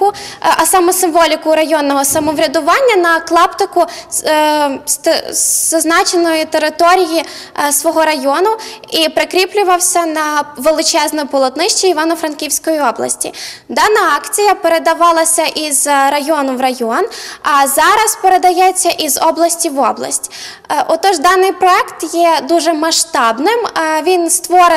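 Nothing stood out on listening to this audio, and there is no point in it where a technical problem can be heard.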